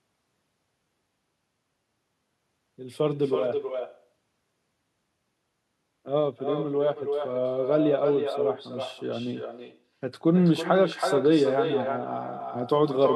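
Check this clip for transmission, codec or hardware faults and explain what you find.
One fault runs throughout. There is echo with no canceller. The far end plays the call through a loudspeaker, and its microphone sends it back unremoved. Each phrase returns roughly a third of a second later. The copy is about 7 dB quieter and thinner.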